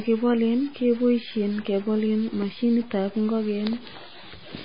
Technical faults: stuck bit; MP3 compression

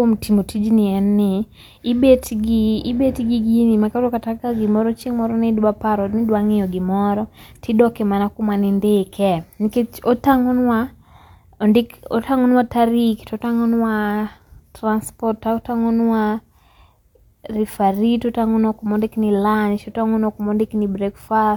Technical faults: none

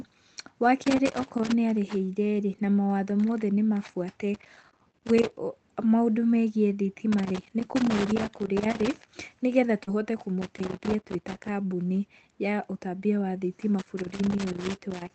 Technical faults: loose connector crackle; short concealed packet loss; lost packet rebuilt from error correction

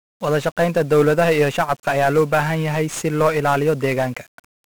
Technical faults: 1-bit DFPWM compression

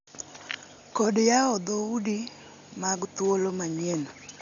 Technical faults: Dolby Digital compression

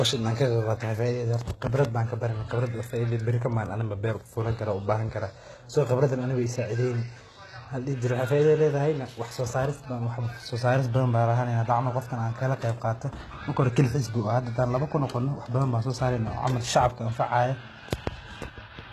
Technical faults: HE-AAC compression

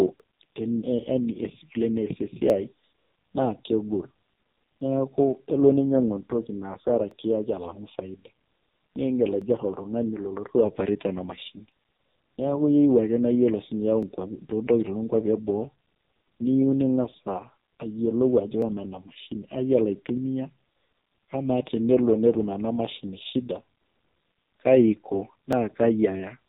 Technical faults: AMR narrowband mobile codec; clock drift buffer slips

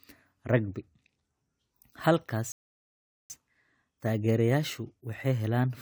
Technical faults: rebuffering stall

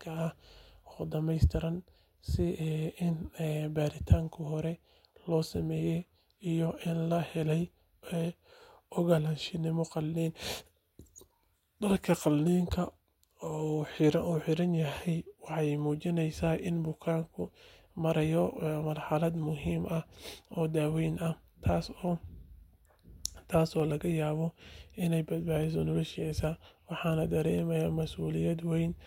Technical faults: dropped samples

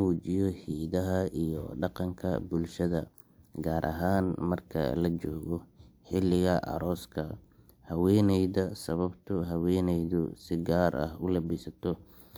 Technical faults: none

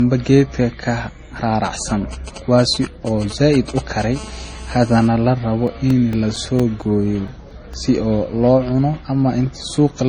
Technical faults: transcoding between lossy codecs; GSM signalling bursts; GSM phone buzz; CD scratch ticks

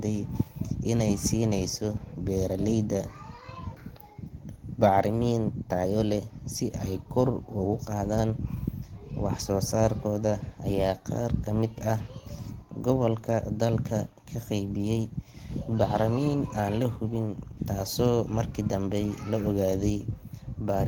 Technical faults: clock drift between sender and receiver; repeated timing corrections

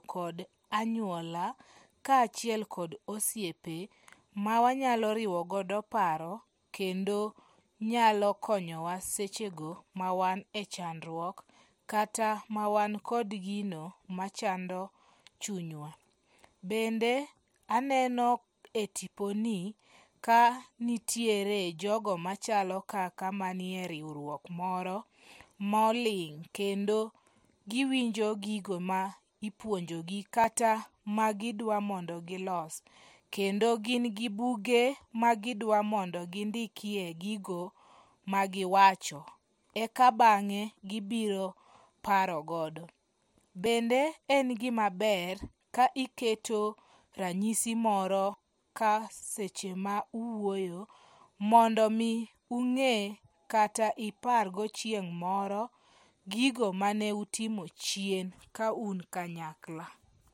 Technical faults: dropped buffer (overrun)

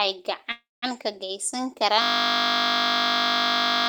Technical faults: call audio freeze; system hang loop

